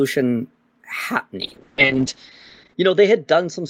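At 1.43 s a call bitrate drop sets in and lasts to the end. The encoder falls from 32 to 7 kbps and sits at its lowest for 1.31 s, so the speech turns coarse and muffled. On a spectrogram the upper edge collapses from 20 kHz to 8 kHz.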